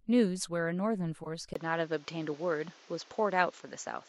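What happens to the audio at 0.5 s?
Nothing goes wrong at 0.5 s; the audio at that moment is intact, with no dropout, click, distortion or other fault.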